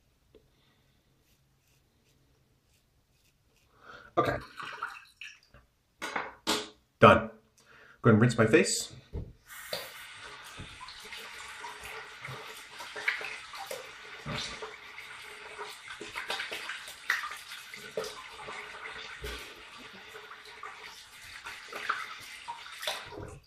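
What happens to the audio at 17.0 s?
Nothing goes wrong at 17.0 s; the audio runs through that moment intact, with no dropout, click or other fault.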